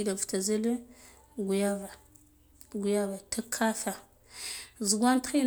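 Nothing technical goes wrong anywhere in this bit of speech, so there's no fault to point to at any moment.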